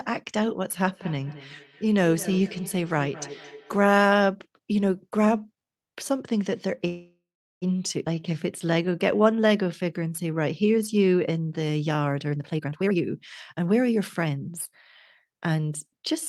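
From 0.84 to 3.98 s there is feedback echo between two devices. A second device in the room replays the far-end audio into the microphone, and neither echo canceller removes it. The speech returns roughly every fifth of a second, thinner and ringing, peaking about 16 dB below the direct speech.

At 6.87 s a call audio freeze begins and lasts until 7.64 s. Packets were likely held up and the jitter buffer ran dry. The last sound is stretched into a fading fill with 400 ms of silence, then speech resumes where it stopped, nothing lost and 744 ms later.

A skip ahead follows between 8.06 and 8.08 s. Roughly a third of a second of audio is discarded, and the two sides are joined by only a 4 ms bridge. The result is an abrupt forward jump with a chunk of speech cut out.

From 8.15 to 11.33 s comes a jitter buffer slow-down. The receiver rebuilt its reserve by repeating individual pitch periods and pause fragments, adding 305 ms. 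Speech runs at 91% speed with unchanged pitch, so sounds are drawn out.

Three jitter buffer speed-ups follow as the buffer sheds excess delay by cutting out pitch periods. From 12.32 to 13.02 s speech runs at 183%, losing around half a second, and sounds clearly rushed. Milder ones follow at 13.53 to 14.72 s (107%, about a tenth of a second removed) and 15.25 to 15.63 s (114%, a few tens of milliseconds), where the pace sounds hurried at the same pitch.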